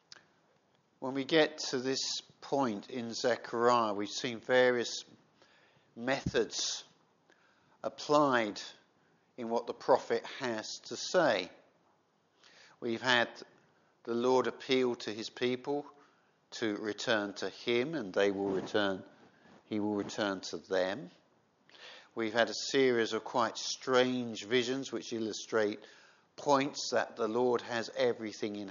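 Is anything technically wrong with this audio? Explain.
Yes. From 0.56 to 0.68 s there is loose connector crackle: a worn contact intermittently breaks the signal, giving irregular scratchy bursts, seen as jagged waveform dropouts and vertical broadband streaks on a spectrogram.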